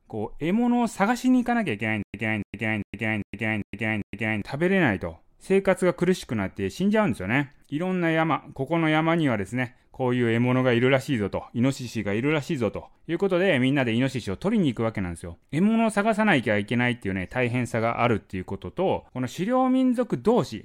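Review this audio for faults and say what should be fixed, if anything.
Stutter with silent gaps, 2.03 to 4.42 s: a 286 ms speech fragment repeats six times, each followed by 113 ms of digital silence, every 399 ms. The stream likely stalled and replayed its last fragment at each retry, losing the speech meant for that span. To prevent it, use a deeper playback buffer and have the player resume from new data after a stall instead of replaying the last fragment.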